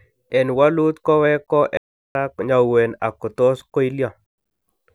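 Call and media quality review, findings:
Playback stall, 1.77–2.15 s: speech cuts to silence for about 380 ms mid-flow, resuming at "ko nyauwen". Likely cause is a player buffer underrun or blocked audio thread. Output starves until data returns.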